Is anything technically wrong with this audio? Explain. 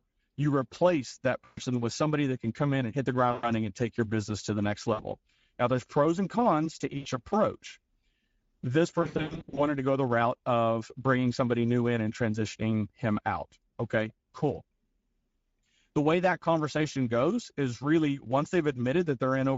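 Yes. The speech is coded with the Speex codec, and the damage is plainly audible throughout. At a rate of about 16.8 kbps the excitation gets few bits, so the voice sounds hoarse and noisy. On a spectrogram the harmonics look smeared, and any band above 4 kHz shows only diffuse, noise-like fill.

VoIP packet loss concealed by the speech codec occurs five times. The gaps are at 1.45 to 1.60 s (after "you replace that", before "with somebody that can"), 3.31 to 3.50 s (after "in and hit the", before "and take your business"), 4.93 to 5.02 s, 6.97 to 7.08 s, and 9.01 to 9.62 s (before "to go the route"). The last one is a scatter of losses over about half a second, with the longest run 100 ms. When packets go missing, the decoder keeps repeating its last pitch and filter at falling gain. You hear a brief buzzy or tonal smear that fades. On a spectrogram this shows as flat, stretched harmonics that dim, and the waveform shrinks and looks repetitive. 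The sound stays weak briefly after packets resume.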